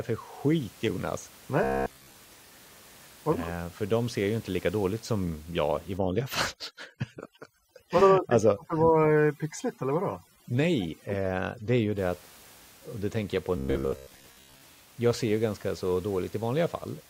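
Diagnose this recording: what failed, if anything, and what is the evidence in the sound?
Between 1.64 and 2.14 s, and from 13.57 to 14.62 s after "det tänker jag på", the speech becomes a rigid metallic buzz at 66.8 Hz. This robotic sound from repeated short buffers is likely a driver or buffer underrun that loops a 15 ms chunk while most of the real audio is dropped.

From 5.98 to 11.98 s, after "dåligt som jag i", the room noise, about 26 dB below the speech, drops and breaks up into twinkling specks. This is overdone noise removal in call processing. Bands near the noise estimate are cut hard, and quiet speech detail goes with them.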